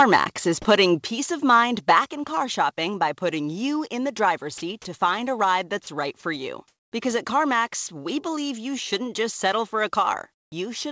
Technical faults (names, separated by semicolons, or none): microphone volume stepped down; sound dropped by the voice detector; comfort noise in place of the background